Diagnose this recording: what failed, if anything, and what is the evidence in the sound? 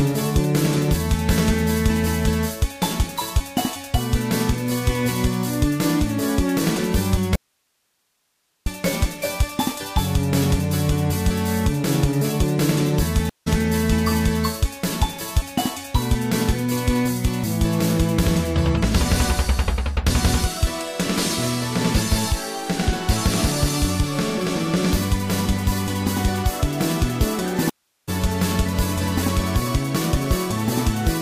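From 7.36 to 8.66 s the sound drops abruptly to hiss about 50 dB down. This is an audio dropout to a faint residue, likely from a broken analogue connection.

Silences of 168 ms at 13.29 s and 380 ms at 27.70 s resume roughly 0.2 s and 0.3 s further on. These are network stream reconnects, each restarting the decoder mid-stream.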